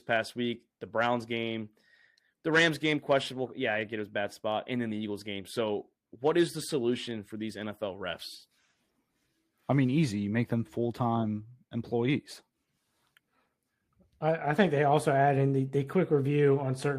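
No technical faults can be heard anywhere in this speech recording. Nothing in the audio breaks, stops or changes unexpectedly at any point.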